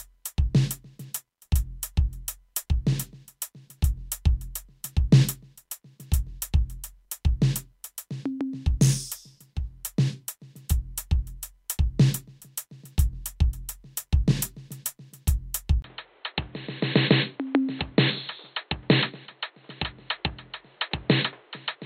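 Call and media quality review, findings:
Music turns dull and boxy from 15.82 s to the end after a 20 ms dropout. Nothing above 4.3 kHz, new background noise roughly 30 dB under the music, level about unchanged. Likely an input switched to a poorer device, a narrower-band capture path replacing the original mid-recording.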